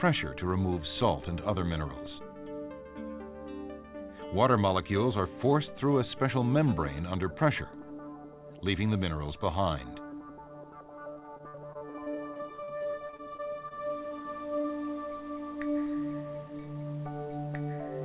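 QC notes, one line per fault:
11.1–14.71 s, repeated packet loss (robotic sound): dozens of short dropouts, the longest about 53 ms, each patched by stretching the previous sound, so about a fifth of this stretch turns choppy over the telephone-band audio, which stops at 4 kHz.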